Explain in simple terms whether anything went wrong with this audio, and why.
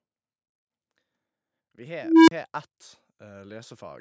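At 2.02 seconds, an unstable filter breaks down in this speech. A low tone, around 300 Hz, swells up quickly. It takes about a quarter of a second to grow very loud and harsh. Then the sound drops out completely for about 35 milliseconds, ending at 2.31 seconds. This happens when a filter that feeds its own output back into itself gets bad settings. Each pass makes the tone bigger until the numbers overflow and the filter resets.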